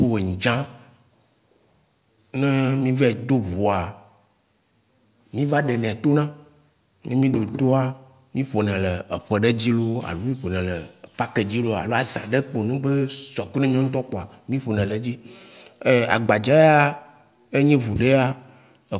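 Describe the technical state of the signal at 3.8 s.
At 3.8 s the speech signal is intact, with no dropout, clipping, glitch or other technical fault at that moment.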